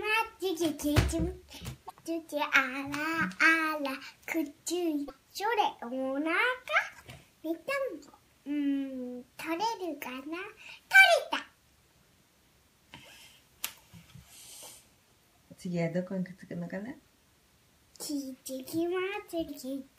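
Damaged data in a compressed stream appears three times: at 1.87 to 1.91 s, at 5.06 to 5.10 s, and at 19.45 to 19.50 s. Each time, a stretch of the encoded bytes is wrong, so the decoder misreads the frames there and loses its place, hunting for the next valid frame header before it can carry on. Each event lasts about 40 ms and is heard as a brief chirp, squawk, click or short hole breaking into the sound.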